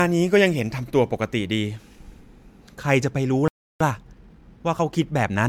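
From the start, the speech sounds swirly, smeared and hollow, with blurred attacks. This is generation loss, likely from about seven MP3 re-encodes near 135 kbit/s.

At 3.48 s the sound stops dead for 0.33 s, until 3.81 s. This playback stall likely came from the player running out of data.

From 3.81 s to the end, the speech runs about 1.1 times fast at normal pitch. This is time-compressed catch-up, clearing the backlog.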